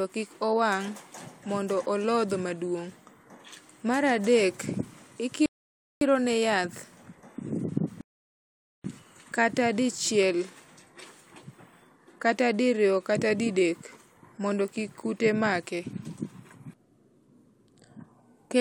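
At 5.46 s the speech cuts to silence for 0.55 s, then resumes with "ne yath". A second gap follows at 8.01 s, lasting 0.83 s. Both are rebuffering stalls. The player ran dry and waited for data. Nothing is lost; time is added.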